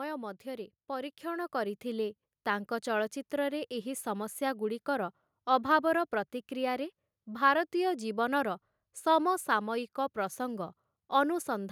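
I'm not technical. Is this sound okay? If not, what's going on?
No. From 0.43 to 2.25 seconds the voice and background swell louder together: automatic gain rising, where the recorder slowly turned itself up after finding the input too quiet.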